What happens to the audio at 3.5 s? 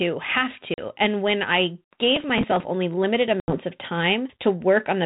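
Just after "only limited", packet loss on an ADPCM call breaks the audio from 3.40 to 3.58 s. About 80 ms, consistent with roughly four lost packets, drops to hard-edged silence. The G.726 decoder, running at 32 kbit/s, has lost track of the sender's predictor and step size, so the speech returns slightly distorted and settles within a short moment. On a waveform this shows as a flat gap followed by the returning speech, and on a spectrogram as a blank vertical band.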